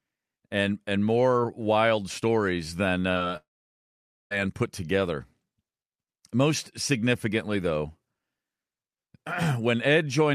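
At 3.11 to 3.17 s, right after "more wild stories than", there is a short concealed packet loss. About 40 ms of the speech arrived too late to decode, and the receiver covered roughly 33 ms of that gap by extending the preceding sound before blending back. It comes across as a brief smear in the syllable.

From 3.37 to 4.33 s the speech is replaced by a long gap before it resumes on "put together". The last sound trails on as a brief fading buzz or hiss, followed by about 0.86 s of near-silence, and a stretch of roughly 0.94 s of speech is simply absent. The likely cause is a long network dropout. On a spectrogram the energy decays into an almost empty band, and the waveform collapses to a flat line until the speech returns abruptly.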